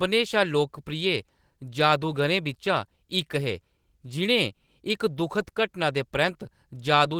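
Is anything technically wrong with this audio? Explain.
Yes. The speech carries two related timing faults.

Clock drift between sender and receiver runs through the whole clip. The sending device's audio clock runs faster than the receiver's, by roughly 4 percent, so audio arrives a little quicker than it is played out. The jitter buffer keeps filling rather than holding steady, and the receiver has to shed material continually to avoid falling behind. The result is a delivery that never quite settles into an even pace.

Repeated timing corrections occur from 0.07 s to 7.15 s. To keep up with the faster sender, the receiver cuts short slices out of the stream again and again, all in the same direction but at uneven spacing. The net effect is playback running at about 104 percent of natural speed. Each cut is small, so rather than clear dropouts they come across as faint hiccups and a slightly hurried, unsteady tempo in the speech.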